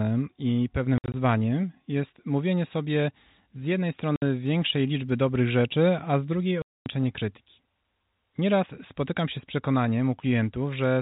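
At 0.98 to 1.14 s, 4.16 to 4.22 s and 6.62 to 6.86 s, packet loss filled with silence cuts hard-edged holes in the speech, the first scattered and the last lasting 240 ms, consistent with 20 ms packets. Each gap shows as flat waveform and a blank vertical spectrogram band.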